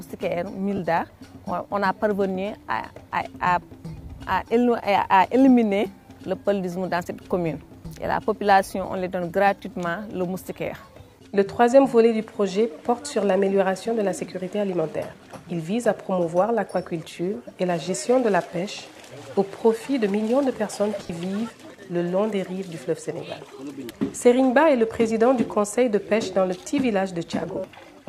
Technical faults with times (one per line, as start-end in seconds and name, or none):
0.76-0.79 lost LE Audio frames
21.03-21.10 lost LE Audio frames